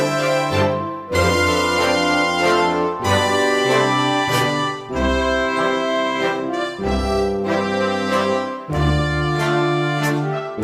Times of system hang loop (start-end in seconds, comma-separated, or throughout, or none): none